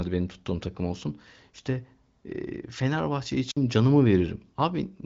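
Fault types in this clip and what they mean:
Wireless microphone squelch dropout: the radio link from an analogue FM microphone weakens until the receiver's squelch shuts the output off. Here, at about 3.47 to 3.57 s, hiss briefly swells and then the sound drops into near silence for roughly 54 ms before returning. That rising static ahead of the hole sets it apart from a digital packet-loss gap, which cuts cleanly. The band-limited, HD Voice–style tone runs throughout.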